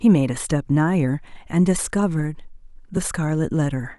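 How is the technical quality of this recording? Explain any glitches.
At 2.97 s the speech jumps forward a touch rather than dropping into silence. It most likely comes from a dropped buffer (overrun): the recording software was late collecting a block of samples, the hardware overwrote them, and the audio on either side was spliced straight together. Only a few milliseconds went missing, so no syllable is lost, but the join in the waveform is abrupt.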